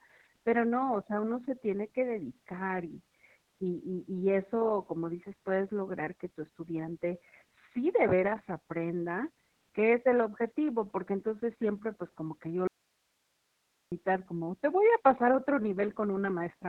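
Speech is muffled, hoarse and slightly robotic throughout, capped near 4 kHz: heavy narrowband Opus voice compression in SILK mode, consistent with a bitrate around 6 kbps. From 12.67 to 13.92 s, right after "pues como que yo", the speech cuts abruptly to faint hiss far below its level, an audio dropout to a faint residue, likely signal loss while the path stayed live.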